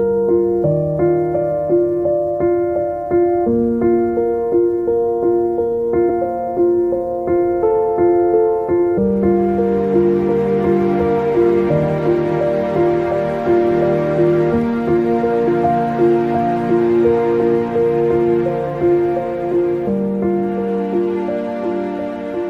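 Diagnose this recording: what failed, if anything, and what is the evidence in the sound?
The codec stage failed: damaged data in a compressed stream gives three brief glitches at 6.09, 8.97 and 15.47 s. At each, the decoder misreads corrupt bytes and loses frame sync, searching for the next frame header.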